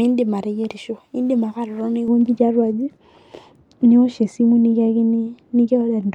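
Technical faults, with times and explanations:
2.08 to 6.14 s, de-emphasis applied wrongly: from just past the two-second mark the speech goes dull and muffled, because a treble-cut curve meant to undo pre-emphasis hits audio that never had any or is applied a second time, so the top slopes away smoothly, down about 11 dB at 10 kHz relative to 1 kHz.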